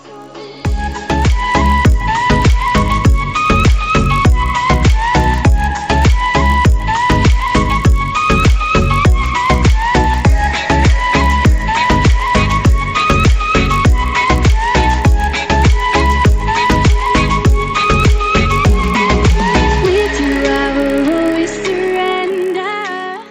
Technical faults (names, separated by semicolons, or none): resampler restarted on every block